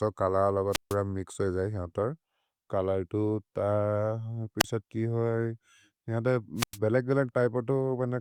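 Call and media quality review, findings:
Wireless microphone squelch dropout, three events. Analogue FM link fading below the receiver's squelch threshold, which gates the output. 0.71–0.96 s: hiss swells, then about 150 ms of near silence before speech resumes. 4.59–4.65 s: short static burst, about 29 ms mute. 6.56–6.78 s: rising static, then about 99 ms hole in the speech. Probable component: RF path between transmitter and receiver.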